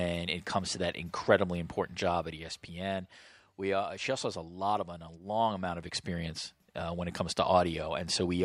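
Just after "to that incredibly important", from 2.02 to 3.38 s, a fine zipping rides on the speech: zipper noise, with the level dropping around ten decibels in about a hundred unsmoothed steps per second.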